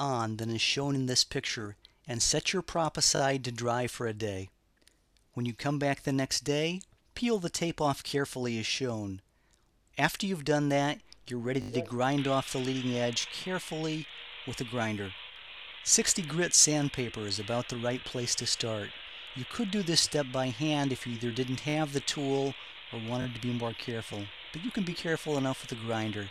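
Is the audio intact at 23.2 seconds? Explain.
No. At 23.22 to 23.26 s, new audio failed to reach the output in time, so the device replayed its last buffer rather than going silent: a repeated buffer. The same short piece sounds three times in a row, two extra plays, each about 20 ms long, which fits a 20 ms buffer. The hard join at each repeat makes this a quick stutter, close to a brief buzz, lasting only about 40 ms. Little or nothing appears to be missing.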